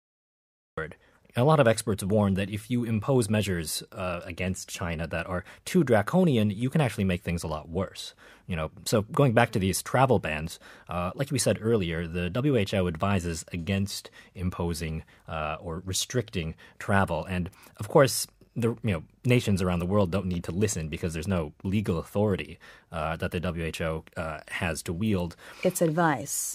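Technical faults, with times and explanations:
0.00–0.78 s, cut-off start: digital silence until 0.78 s, then speech begins abruptly mid-sound with no natural attack, because the recording began late.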